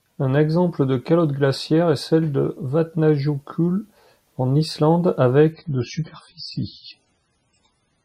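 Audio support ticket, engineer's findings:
Adaptive stream at lower bitrate, 5.52 s to end. Abrupt switch, no gap. Nothing above 10.4 kHz, artefacts rise. Fits a 16 kbit/s MP3 rendition.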